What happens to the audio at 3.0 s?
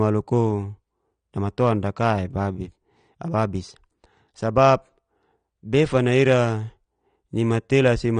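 At 3.0 s, as throughout, the speech sounds dull and smeared with nothing above 9.7 kHz. That's likely AAC compression starving the frequency lines, fitting about 32 kbps.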